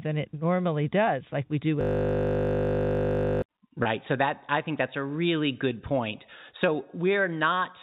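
A system hang loop runs from 1.81 to 3.42 s, starting just after "does like we do". The machine froze while the audio hardware kept replaying one 20 ms slice of its ring buffer, about 80 times over. The result is a steady 50 Hz buzz rather than speech.

Packet loss with pitch repetition follows at 3.83 to 3.85 s. About 20 ms of audio went missing, which fits two lost packets. The receiver filled the gap by repeating the last pitch period, so the speech briefly sounds held and slightly buzzy before it resumes.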